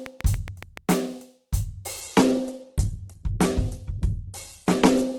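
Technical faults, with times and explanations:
0.06–0.93 s: train of clicks. Seven or so identical clicks arrive at a steady 7 per second, peaking around 10 dB above the music and ticking through quiet moments too. The regular, uniform pulses likely come from electrical interference or a faulty connection.
2.01–5.19 s: adaptive stream at a lower bitrate. Without any gap, the music suddenly loses its top end, with nothing above 12.1 kHz, and codec artefacts thicken. The change points to a stream dropping from roughly 64 kbit/s Opus to about 12 kbit/s until the end.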